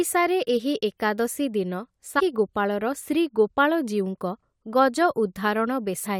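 Damaged data in a compressed stream cuts into this speech clip twice, from 2.18 to 2.20 s, just after "ଏହି ଏକାଦଶୀ ଦିନ", and again from 6.05 to 6.07 s. Each time a short stretch of the encoded file is corrupt, so the decoder mangles or throws out those frames, loses its place, and has to hunt for the next valid frame header. What comes out is a brief chirp or blip about 20 ms long.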